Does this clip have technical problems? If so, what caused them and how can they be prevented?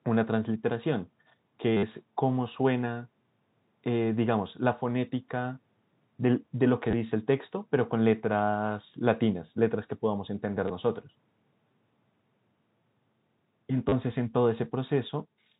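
Yes. Packet loss with last packet repeated occurs at 1.77 s (60 ms), 6.91 s (20 ms), 10.68 s (20 ms) and 13.89 s (30 ms). The receiver replays the previous packet, which gives a brief robotic buzz, consistent with 10 ms packets. A more reliable network path, with proper packet loss concealment at the receiver, would prevent it.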